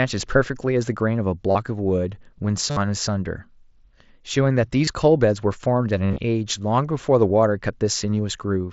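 Concealed Bluetooth headset packet loss occurs at 1.51 s (about 38 ms), 2.70 s (60 ms), 4.85 s (23 ms), 6.06 to 6.19 s (scattered losses totalling 90 ms), and 7.28 s (a nearly hidden single blip). The receiver filled each gap by repeating recent waveform, so the longer runs sound like a buzzy tone at full level with a slight warble on recovery. This distinguishes them from dropouts, which go silent.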